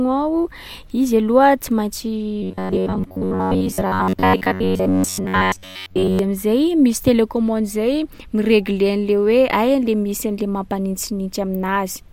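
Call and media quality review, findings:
Robotic sound from repeated short buffers, 2.43–6.19 s, before "am’zay misy": metallic 93.8 Hz buzz across most of it; likely underrun looping 10.7 ms chunks.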